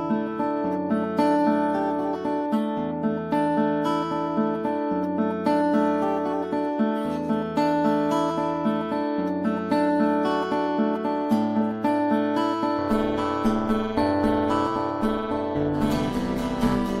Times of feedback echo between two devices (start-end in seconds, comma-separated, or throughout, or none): none